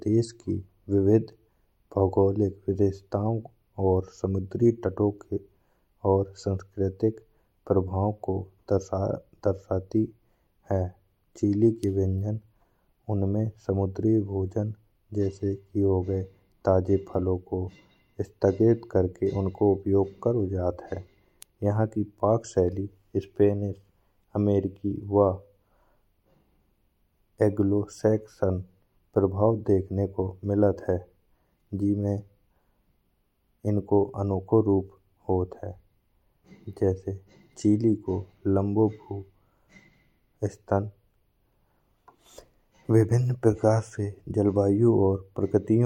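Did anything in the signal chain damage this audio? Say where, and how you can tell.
No, nothing along the chain has left a mark here; it's just the speech as recorded, with no stage giving itself away.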